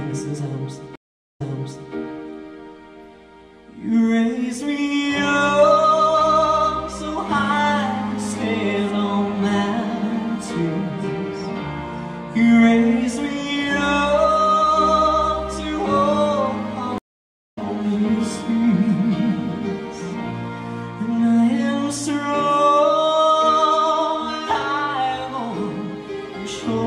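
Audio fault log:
0.96–1.94 s, stream reconnect: about 0.41 s of silence, then a fresh decoder resumes 0.58 s earlier, replaying sound. The repeat is what distinguishes it from a simple dropout.
16.98–17.58 s, stream reconnect: about 0.55 s of silence, then playback restarts roughly half a second later. The skipped material, not just a gap, marks the reconnect.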